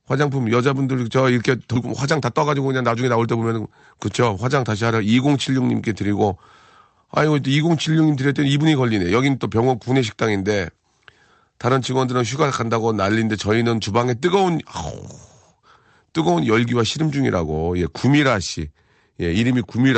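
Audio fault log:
1.75 s, skip ahead: Playback jumps straight forward with no gap filled. Roughly 0.7 s of speech is gone. The two sides are joined almost directly, so the speech lurches ahead abruptly. This points to audio discarded while later packets were already waiting.
1.85 to 3.57 s, jitter buffer speed-up: The speech runs at 109 percent speed with its pitch unchanged. The receiver trims many short pitch-period pieces, roughly 150 ms in total, to shrink excess buffered delay after the jump. The talking sounds briefly hurried.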